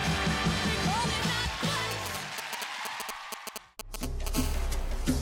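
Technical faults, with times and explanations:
1.91 to 4.28 s, GSM signalling bursts: a nearby 2G phone is signalling, sending short clusters of radio bursts that the audio circuitry rectifies. The result is a galloping dit-dit-dit of brief 217 Hz buzzes, fairly loud, only a few dB under the sound.
4.35 to 5.17 s, GSM phone buzz: the phone has moved into a call and now transmits bursts continuously at 217 per second. Rectified by the audio path, this becomes a steady, raspy 217 Hz buzz rich in harmonics, about 13 dB below the sound and unrelated to it.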